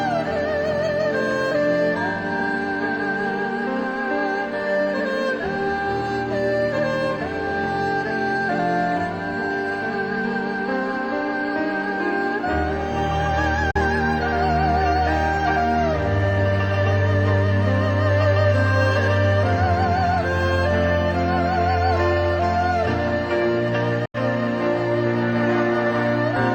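The audio cuts out twice, at 13.71 to 13.77 s and again at 24.05 to 24.18 s, leaving silent holes of about 60 ms and 120 ms. In both cases the sound resumes further along, as if it had kept playing through the gap. That's likely a Bluetooth dropout, where packets don't reach the headphones in time and get discarded, and the lengths fit a handful of codec frames going missing each time.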